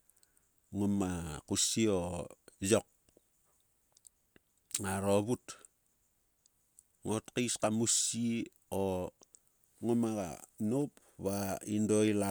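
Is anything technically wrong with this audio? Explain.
No, nothing is technically wrong with this audio.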